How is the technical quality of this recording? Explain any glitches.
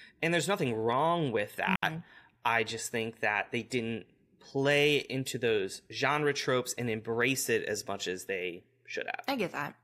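The recording has one glitch, a digital wireless dropout. At 1.76 to 1.83 s, right after "there's nothing wrong with", the receiver lost too much of the incoming data and muted itself for about 71 ms. The result is a clean hole of near silence with no noise burst on either side.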